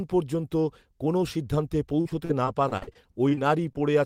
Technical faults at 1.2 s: none

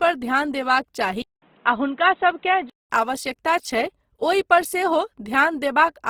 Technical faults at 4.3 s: Opus compression

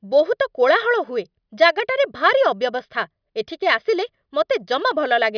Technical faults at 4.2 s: none

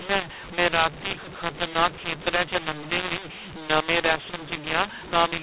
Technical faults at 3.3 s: mu-law and A-law mixed up

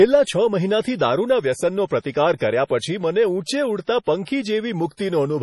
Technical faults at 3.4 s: MP3 compression

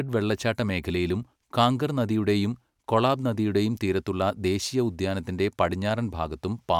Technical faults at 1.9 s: none

